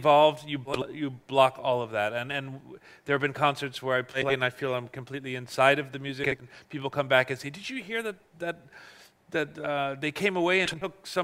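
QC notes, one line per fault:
0.65–0.83 s, 4.13–4.32 s, 6.23–6.46 s, 10.65–10.86 s: frames out of order. Two neighbouring 80 ms blocks play swapped, giving a garbled flutter.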